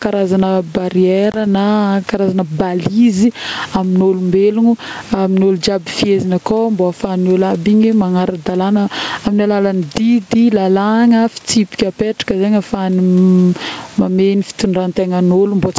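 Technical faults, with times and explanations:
Throughout, gain pumping: the input gain appears set far too high for the microphone, so a fast limiter or compressor is likely clamping it down on every loud syllable, with a swing of roughly 15 dB. The gap between loud and soft passages shrinks, leaving the speech squashed. The room noise itself sits far below the speech and belongs to the recording.
1.32 to 1.37 s, packet loss on an ADPCM call: about 20 ms of audio, which fits a single lost packet, dropped out and was replaced with silence, leaving a hard-edged hole just before "na karazagna balise amin'olombelogno". Because the decoder's adaptive predictor and step size drifted out of step with the sender's during the gap, the speech comes back slightly distorted, then settles within some tens of milliseconds as the G.722 decoder resynchronises.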